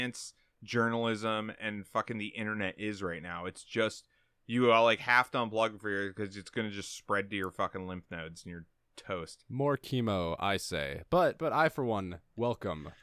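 No faults can be heard anywhere in the recording, and nothing in it calls for a note or a timestamp.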